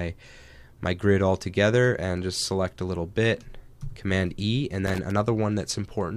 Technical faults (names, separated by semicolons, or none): loose connector crackle